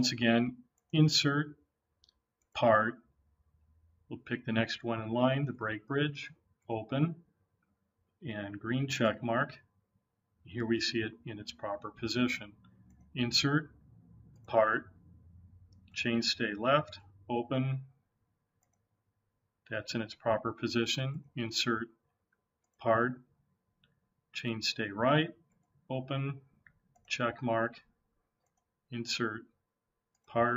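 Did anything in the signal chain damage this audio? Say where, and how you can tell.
No, nothing along the signal chain has left an audible mark on this audio, which holds steady at every stage from capture to playback.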